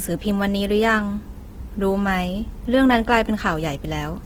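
All the way through, the speech has a grainy, rough texture that's plainly audible, the kind you get from Opus compression, likely in its music (CELT) mode. The encoder holds on to each band's energy but runs short of bits, so the detail gets filled in with folded or noisy content rather than left as holes. That's why it sounds coarse instead of swirly. The bandwidth stays wide, reaching about 20.2 kHz, even at a low rate around 16 kbps.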